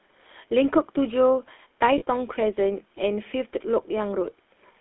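GSM full-rate codec damage runs from start to finish. The coder describes the vocal tract with a small set of filter settings and excites it with a sparse, regularly spaced pulse train instead of the real waveform. That discarded detail comes back as a clearly audible buzzy, gravelly grain on the speech, consistent with the 13 kbps full-rate GSM codec. The band is also narrow, running from roughly 250 Hz to 3.5 kHz, so the sound is thin and boxy, with no low body and no high-end air.

Lost GSM frames occur from 1.98 to 2.03 s, a gap of about 40 ms, which fits two missing 20 ms frames. The decoder had no fresh data there, so it reused the last good frame's settings to bridge the hole. Because the same filter shape is repeated rather than speech continuing naturally, the sound briefly freezes into a short, rough, metallic ring. Normal decoding resumes before the level fades out completely.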